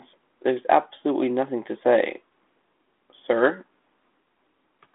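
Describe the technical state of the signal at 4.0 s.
At 4.0 s the speech is intact, with no fault at that moment, and it carries the narrow telephone band of a G.726 ADPCM path at 32 kbit/s, with nothing above 3.8 kHz.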